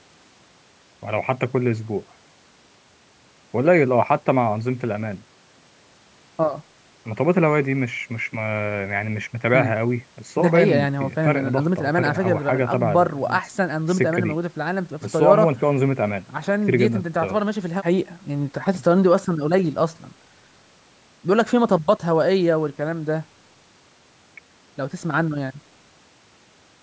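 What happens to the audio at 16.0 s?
Nothing goes wrong at 16.0 s: the speech passes through intact, with only the usual call microphone processing shaping it, its high-pass filter removing the lowest bass and nothing present above 8 kHz.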